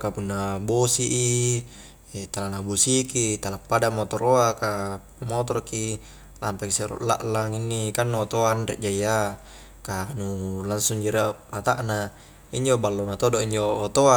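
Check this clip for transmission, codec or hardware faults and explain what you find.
Nothing amiss turns up on listening: the speech signal stays continuous and stable throughout, with no faults to report.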